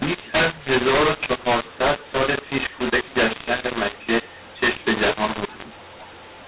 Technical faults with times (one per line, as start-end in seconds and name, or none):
0.00-6.48 mu-law and A-law mixed up